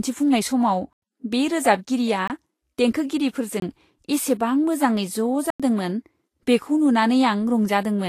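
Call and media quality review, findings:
Vorbis compression throughout, likely at a low bitrate near 33 kbps: nothing above 14.2 kHz, treble turned into grainy hiss, roughened tones, blurred attacks. It is noise-like, not warbling.

Block of digital silence at 0.93 to 1.02 s (just before "बे रोजाबगिरिया"), 2.28 to 2.30 s (just after "बे रोजाबगिरिया"), 3.60 to 3.62 s, and 5.50 to 5.60 s. Gaps of 93 ms and 23 ms match 4096-sample and 1024-sample blocks, pointing to late output buffer fills. Hard cuts to silence, no fade or concealment fill.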